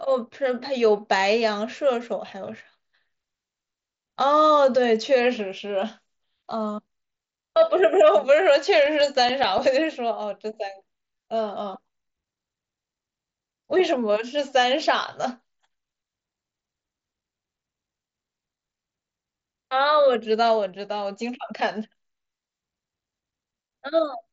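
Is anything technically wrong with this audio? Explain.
Yes. Between 8.86 and 9.87 s the speech carries CD scratch ticks. Eight ticks of uneven strength repeat at a steady rate of about eight per second. Each lasts only a few milliseconds. A scratch destroys more data than error correction can rebuild, once per disc revolution. The player then interpolates or mutes those samples. The audio also passes through an mSBC Bluetooth headset codec, which adds a light grain to louder sounds.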